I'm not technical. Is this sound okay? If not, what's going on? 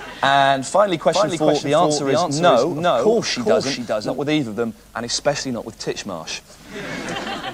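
No, not quite. From 1.13 to 4.17 s there's a doubled audio track: a noticeably quieter second copy trails about 0.4 seconds behind, then cuts off abruptly. Most likely the sound got captured twice through a slower second path.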